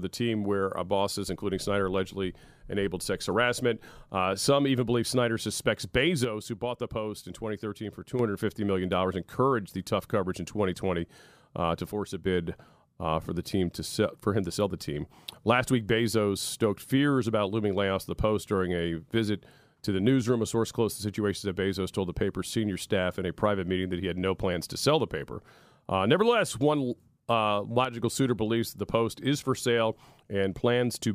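At 6.24 s the speech abruptly drops by about 6 dB and stays down until 8.19 s, then snaps back. The same dip returns from 11.91 to 12.26 s and again, very briefly, from 27.85 to 27.99 s. That sudden half-level step is the classic sign of one channel dropping out: with one side of the stereo pair gone, the mono sum likely keeps only half of the shared signal.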